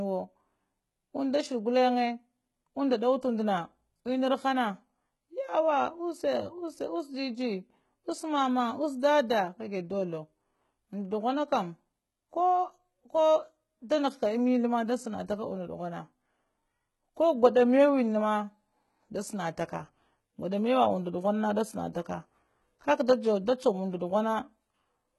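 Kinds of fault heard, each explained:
HE-AAC compression: Throughout the speech the treble sounds synthetic, with s sounds coming out gritty, metallic and lispy, and the upper range not quite belonging to the lower voice. The damage is heavy, likely from HE-AAC at a very low rate, one that fits around 16 kbps, where only the lower spectrum is truly coded and the treble is rebuilt by copying lower bands upward under a coarse envelope, so harmonics misalign across the crossover.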